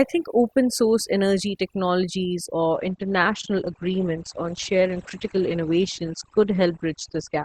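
Overdone noise removal runs through the whole speech clip. The suppressor was set too hard. It cuts individual frequency bands whenever they sit near its noise estimate. Quiet parts of the voice vanish with them. Pauses fall to near silence with twinkling specks.

At 2.74 s an adaptive stream switches to a lower bitrate and stays there to the end. There is no gap, just a sudden loss of quality. Nothing remains above 8.7 kHz. The top sounds dull, and codec artefacts rise. This points to a step down from about 64 kbit/s to about 12 kbit/s Opus.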